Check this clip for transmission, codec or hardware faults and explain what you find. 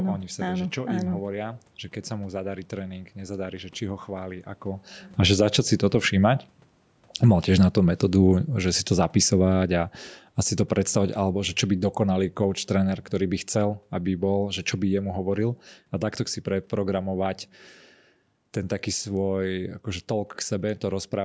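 One fault is present: automatic gain falling. From 7.09 to 9.92 s the gain control, judging the input too loud or its background noise too strong, gradually lowers gain by about 4 dB, so the speech and its room noise sink together.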